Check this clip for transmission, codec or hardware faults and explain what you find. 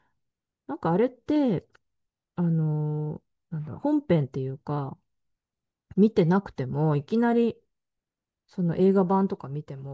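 No faults turn up when checking this clip.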